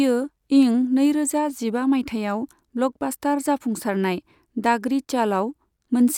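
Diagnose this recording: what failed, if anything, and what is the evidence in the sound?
Nothing stood out on listening to this speech recording that would point to a failure at any stage of the chain.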